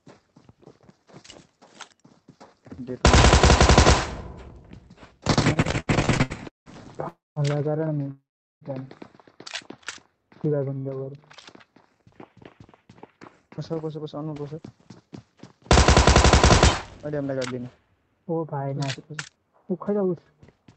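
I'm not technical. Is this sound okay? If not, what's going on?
No, it has glitches. From 5.53 to 6.69 s there's repeated stalls (stutter): eight little hiccups where late data left gaps, so the sound drags and skips.

At 7.08 to 7.39 s and 8.11 to 8.64 s there are two call audio freezes. The sound buzzes, fades, then goes quiet for about a fifth and then about two fifths of a second, likely from data held up in transit.

Right between those, at 8.03 s, a short stall from a late packet briefly holds one sound a hair too long.

Afterwards the system catches up with jitter buffer speed-up. From 10.99 to 12.03 s, 12.85 to 15.62 s and 17.05 to 20.64 s, the audio runs 4 to 7% fast, with the pitch unchanged, so it sounds a bit hurried.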